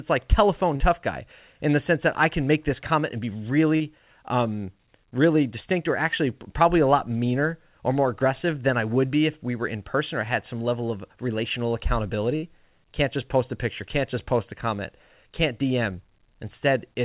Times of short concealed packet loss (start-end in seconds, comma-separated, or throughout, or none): 0.76-0.82, 3.76-3.82